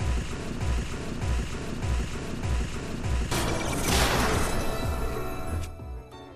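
From 0.61 s to 3.31 s, a broken-record loop takes over. A fragment of about 0.61 s repeats exactly, back to back, four times. Likely the player or stream stalled and kept resending its last fragment. The audio meant for that span is lost.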